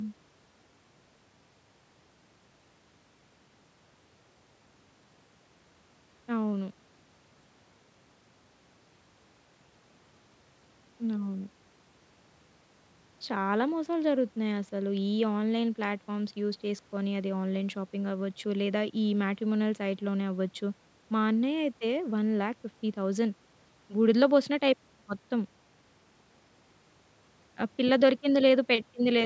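Speech, with nothing technically wrong to report. It has passed through a call's microphone processing, which is working normally: the lowest bass is trimmed by its high-pass filter and nothing reaches above 8 kHz.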